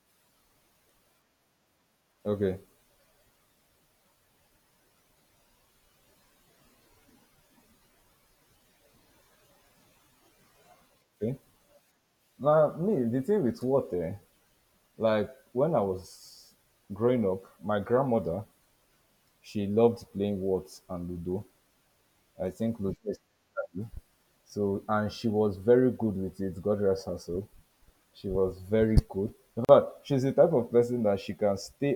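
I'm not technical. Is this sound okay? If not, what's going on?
No. The speech was saved in separate pieces and joined without trimming the silent padding each piece carries at its edges, a gap at a join of encoded pieces. At 29.65 seconds the speech drops out for about 40 milliseconds, then resumes where it stopped.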